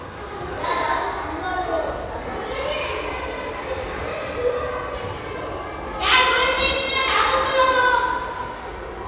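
A recording of sounds, with nothing technically wrong anywhere in it. No dropouts, distortion or other playback problems can be heard.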